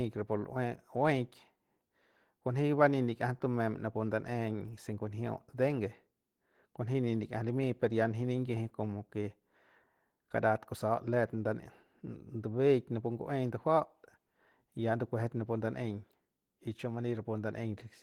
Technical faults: Opus voice compression

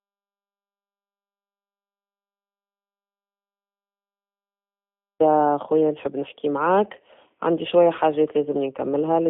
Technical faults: G.729 codec; audio dropout to silence

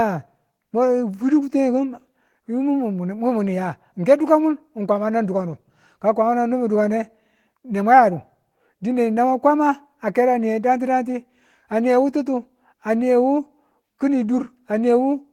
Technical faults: none

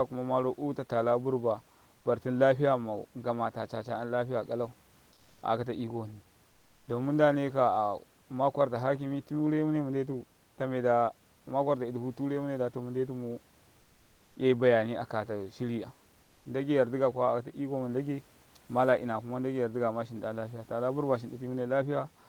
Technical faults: comfort noise in place of the background

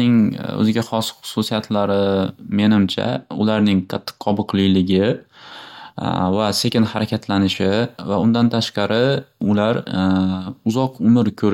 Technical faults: none

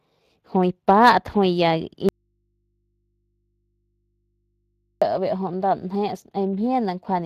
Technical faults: Speex codec; audio dropout to a faint residue

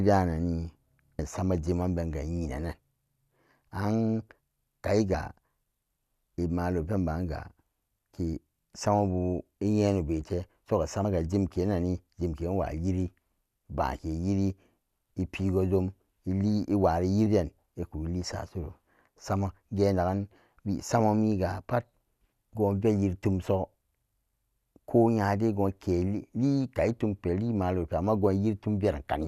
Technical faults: compressed frames skipped

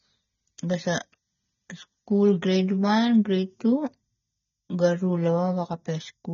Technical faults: AAC compression

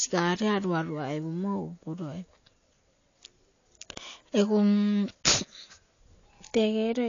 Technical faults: AAC compression

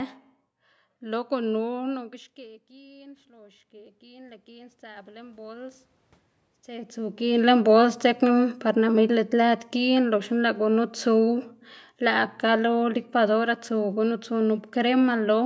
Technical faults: automatic gain rising; automatic gain falling

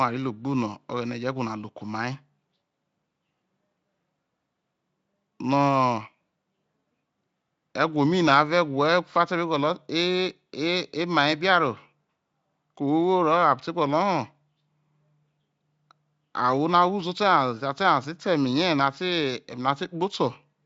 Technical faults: none

